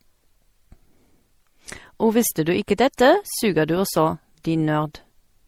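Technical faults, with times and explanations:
Throughout, transcoding between lossy codecs. The speech carries two sets of compression artefacts at once. The second encoder spends bits on the first one's damage and adds its own. This likely follows an MP3-type encode re-encoded as Opus. Nothing remains above 20.2 kHz.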